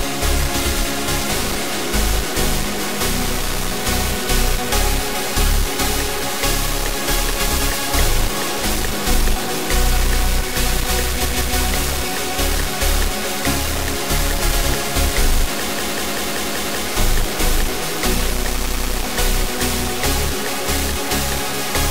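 The audio carries a constant noise-and-distortion layer that also fills the pauses, likely a stuck bit flipping values by one fixed weight. Repeated frames cause stutters: a 160 ms block plays twice more at 11.25–11.58 s, a 192 ms block six more times at 15.70–16.85 s, and a 96 ms block three more times at 18.61–18.90 s.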